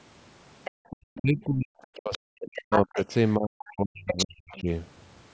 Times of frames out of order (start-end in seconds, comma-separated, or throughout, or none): none